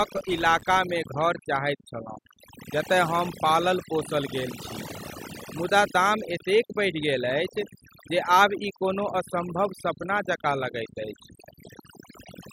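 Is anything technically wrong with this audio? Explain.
Yes, there are two faults in this speech clip.

Overdone noise removal runs throughout. A noise reducer set far too aggressively mutes individual frequency bands whenever they sit near its noise estimate, taking quiet voice detail with them. The background drops and breaks up into twinkling specks.

A filter restarted on every block affects 0.0 to 0.8 s. The filter discards its state at each block boundary and begins from silence, so every block opens with a tiny transient. These repeat as a 200 Hz buzz that tracks the speech level, which points to blocks about 5 ms long.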